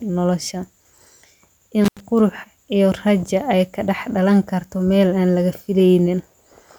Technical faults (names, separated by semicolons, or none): intermittent contact